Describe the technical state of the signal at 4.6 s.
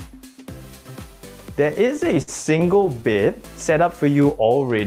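At 4.6 s the sound is dragging: it plays slower at an unchanged pitch, with stretched-out sounds, running at about 85% of normal speed. This is a jitter buffer slow-down, spanning 4.05 to 4.65 s. With its reserve running low or its target delay just raised, the receiver repeated individual pitch periods and fragments of pauses over and over, stretching this stretch by roughly 97 ms to rebuild its buffer.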